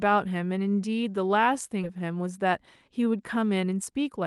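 At 1.83 to 1.85 s the speech jumps forward in a skip ahead. Roughly seven tenths of a second of audio never plays, and the two sides are butted together with no silence in between. That missing gap is what separates it from a dropout, where the lost stretch would leave a hole of silence or fill. The jump points to audio thrown away while later packets were already queued, so playback lands on later material and the delay shrinks by about the same amount.

From 1.95 to 4.20 s the jitter buffer speed-up takes over. With more audio held than it wants, the receiver trims short pitch-period-sized pieces again and again, running the speech at about 109% of normal speed and removing roughly a fifth of a second in all. The pace sounds hurried, but the pitch stays where it was. That is what sets it apart from a resampling or clock error, which would raise the pitch along with the tempo. All of this rides on the Opus call path at 32 kbps, whose 12 kHz upper limit caps the highs.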